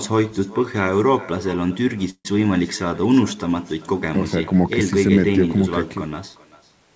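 Throughout this speech recording, every phrase is trailed roughly 0.4 s later by a faint, thin copy at about 22 dB below the voice. That is echo with no canceller: the far end's loudspeaker feeds its microphone, and the returned signal is never removed. From 2.10 to 2.27 s the sound stalls into a short fading fill, drops to silence for about 70 ms, then resumes exactly where it left off with nothing lost, only delayed by 149 ms. This is a call audio freeze, likely caused by late packets draining the jitter buffer, and the receiver concealed the wait before normal playback returned. The audio also tops out at 8 kHz, as expected from a G.722 call path.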